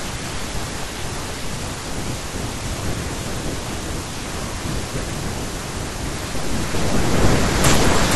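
A doubled audio track runs through the whole of this speech clip: a second, full-band copy trails the original by about half a second, roughly 5 dB quieter, with no decay or room colour. It is likely a second capture through a slower path mixed back in.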